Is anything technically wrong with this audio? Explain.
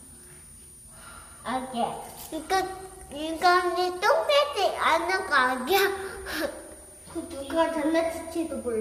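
Yes, there are two faults, both present for the whole clip.

A switching supply whistle runs throughout. It is a thin high tone between about 9.3 and 9.5 kHz, roughly 25 dB below the sound. A switching power supply cycling at an audible rate leaks that tone into the audio. Its pitch wanders slightly within that band.

The audio also carries coding damage throughout, and it is plainly audible. The likely cause is low-delay AAC compression, AAC-ELD, at a rate that fits about 32 kbps. Its short frames resolve fine tonal detail poorly, so noise fills the gaps and the texture coarsens.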